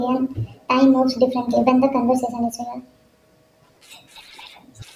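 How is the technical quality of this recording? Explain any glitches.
The speech suffers from a wrong sample rate throughout. It plays about 1.45 times too fast without conversion, fitting 22 kHz audio played at 32 kHz. Pitch rises about 6.5 semitones, so voices sound high and hurried.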